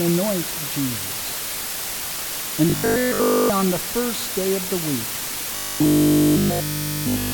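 With the signal rounded to very few levels, consistent with about 4 bits, and dithered, low bit depth with dither lays a steady, even hiss throughout, nearly as loud as the sound itself.

From 2.70 to 3.50 s and again from 5.56 to 7.32 s, a robotic sound from repeated short buffers appears, likely from one 20 ms stretch looping in place of fresh audio. It becomes a rigid 50 Hz metallic buzz.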